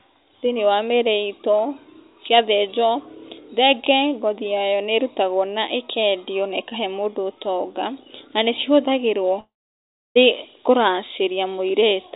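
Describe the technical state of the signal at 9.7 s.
At 9.7 s the signal falls in a long network dropout, 9.4 to 10.17 s, after "ũtonga na nĩ cihũthagĩrwo", likely lost packets. The receiver stretches the last sound into a fading buzz, then silence: on a spectrogram, a smeared band fading to empty gap.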